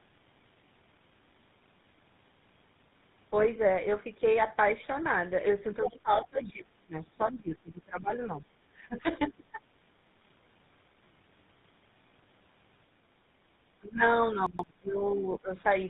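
Throughout the clip, tandem speech coding shapes the speech: it has been coded twice with a GSM full rate codec, decoded in between and passed through a G.711 A-law link, with the second GSM stage re-encoding the first one's already damaged output. The sound is rough, muffled and warbly, with nothing above 3.8 kHz. That gritty, bubbling texture fits GSM full rate at 13 kbit/s heard twice in a row.

From 5.84 to 6.00 s, the other side's voice leaks through, likely because an echo canceller failed to remove the far end's loudspeaker sound from the microphone. A brief scrap of a second voice sits only about 5 dB below the talker.

Speech suppressed in double talk follows almost at once, likely because the echo canceller could not tell the talker from the echo and turned everything down. The talker's voice sinks by up to about 25 dB from 5.89 to 6.94 s, and by about 20 dB from 7.14 to 8.42 s. 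It then loses shorter pieces of about 15 dB from 8.77 to 9.07 s and from 9.23 to 9.60 s, dipping and thinning in patches.

From 10.03 to 10.11 s, chunks play out of order. A segment of roughly 43 ms was delivered one chunk late and plays after the audio that should follow it, leaving three hard joins. This produces a short jumbled moment.

The double-talk suppression returns from 13.79 to 14.02 s and from 14.36 to 15.50 s, pulling the voice down by about 20 dB in pieces. Inside that stretch, from 14.46 to 14.64 s, another chunk of about 43 ms plays out of order, roughly three chunk lengths late. The result is a garbled jumble layered on the already ducked speech.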